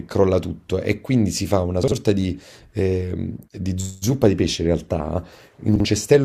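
Speech with chunks out of order at 1.84–1.92 s and 5.76–5.85 s. Each time, a 43 ms chunk plays one slot late, jumbling the sound across three hard joins.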